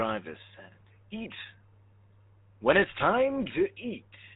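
Throughout, the speech carries GSM full-rate codec damage: pulse-driven vocal-tract modelling leaves a gravelly buzz, nothing passes above 3.8 kHz, consistent with a 13 kbps stream.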